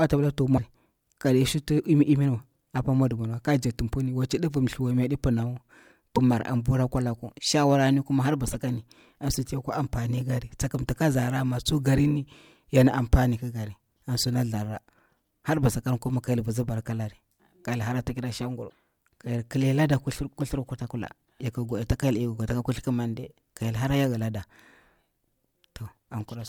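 At 0.54–0.59 s, 6.13–6.19 s, 8.53–8.55 s after "laku shawara ni har", 14.25–14.27 s after "amfani ki kara an", and 18.66–18.74 s, damaged data in a compressed stream makes the decoder misread corrupt frames and lose sync, producing brief chirps and blips in the speech.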